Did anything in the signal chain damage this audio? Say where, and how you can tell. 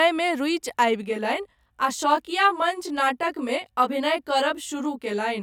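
Yes. Channel delay (comb filtering) at the driver or buffer stage: from 1.03 s the speech sounds rough and slightly doubled. One channel lags around 20 ms, so the mono sum notches evenly from about 30 Hz.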